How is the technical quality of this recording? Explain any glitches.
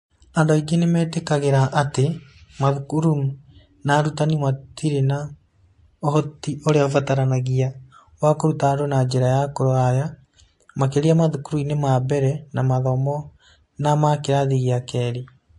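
The recording has plainly audible lossy coding damage running from start to finish, most likely MP3 compression at a low bitrate that fits roughly 48 kbps. With so few bits, the encoder trims the treble above a fixed cutoff and drops quieter frequency lines, letting them flicker in and out between frames. The speech comes across dull at the top, with a watery, swirling texture, metallic chirps on s sounds, and consonant onsets smeared rather than crisp.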